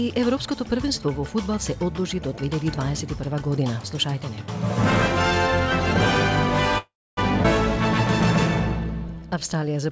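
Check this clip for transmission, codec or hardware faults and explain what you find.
Three transmission faults are audible, all from the call's packet delivery and jitter buffer, over a call path whose wideband coding leaves nothing above 8 kHz.

Call audio freeze, 6.78 to 7.19 s. The sound stops progressing and the last moment is stretched into a fading buzz that drops to silence for roughly the final 0.27 s of the 0.39 s stall. The likely cause is packets held up in transit, draining the jitter buffer so the receiver had to invent audio. When delivery resumes, playback picks up exactly where it stopped. Nothing is lost, but the stream now runs about 0.39 s later.

Skip ahead, 7.43 to 7.46 s. Playback lurches forward with almost no gap: the two sides are stitched together across a fill of only about 8 ms. Roughly 150 ms of material is missing. A stretch was dropped, either in transit or by the jitter buffer overflowing, while newer audio was already queued, and that cut back part of the added delay. 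The result is an abrupt splice rather than a pause.

Jitter buffer slow-down, 9.08 s to the end. The audio runs at about 85% speed with pitch unchanged, so sounds are drawn out. The buffer was rebuilding its reserve by repeating individual pitch periods and short pause fragments many times over. Across this stretch that repetition adds about 136 ms.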